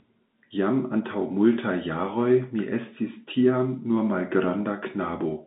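No technical faults can be heard in the speech, which carries the narrow band of G.711 A-law telephone coding at 64 kbps, with the line passing roughly 150 Hz to 3.7 kHz and nothing heard above 3.8 kHz.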